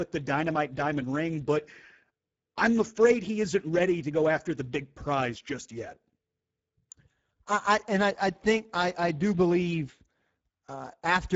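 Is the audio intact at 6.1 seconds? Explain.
No. The Speex codec damage runs through the whole clip, so at 6.1 s the speech is already degraded. Speex is a CELP codec that models the voice and spends too few bits on the excitation at this setting, which fits a low bitrate of roughly 10 kbps. The damage is plainly audible: the speech sounds noisy and hoarse, the band above 4 kHz is only a shaped, noise-like fill, and nothing is heard above 7.7 kHz.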